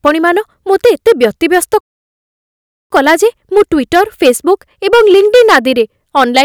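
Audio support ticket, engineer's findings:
Speech cuts to dead silence mid-flow at 1.81 s, resumes at 2.90 s, about 1.1 s gap. Playback stall; likely the player's buffer ran dry or its output thread was blocked. Output starved until the data feed recovered.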